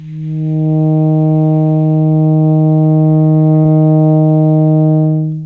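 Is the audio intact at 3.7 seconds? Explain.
No. Short concealed packet loss hits the music at 3.62 to 3.68 s. About 30 ms never arrived, so the receiver extended the preceding sound, leaving a brief smear.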